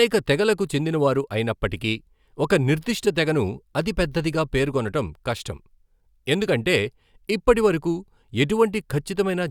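No technical faults can be heard anywhere in the recording. Nothing in the speech calls for a timestamp or a closer listen.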